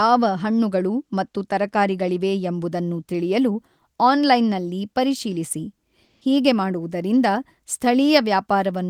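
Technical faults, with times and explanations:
6.03–6.21 s, comfort noise in place of the background: between "ಎಂಬುದನ್ನು ತಿಳಿಯಲು ಆನ್ಲೈನ್ನಲ್ಲಿ ಪರಿಶೀಲಿಸಿ" and "ಹೀಗೆ ಮಾಡುವುದರಿಂದ", the faint background, about 52 dB below the loudest speech, turns flat and featureless and shifts in level by about 5 dB. This is likely discontinuous transmission, as in Opus DTX, filling the 180 ms pause with synthetic noise.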